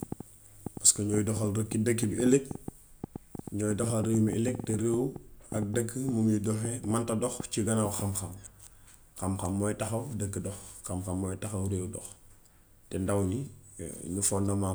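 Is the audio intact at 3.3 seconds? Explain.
No. A train of clicks runs from 0.03 to 8.0 s, covering 3.3 s. Short pulses arrive irregularly, about 5.9 per second, roughly 10 dB above the speech. This is likely interference from nearby equipment. It sounds like uneven ticking, even in pauses.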